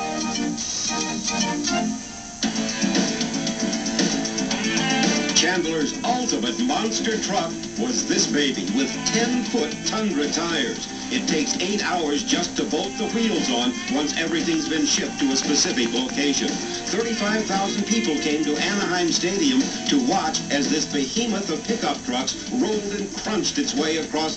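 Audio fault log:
14.32–16.10 s: train of clicks. About ten same-shaped clicks arrive at a regular 4.5 per second, roughly 10 dB above the surrounding audio, heard as steady ticking. Such a repeating pulse likely comes from interference from nearby equipment or a faulty connection or power supply.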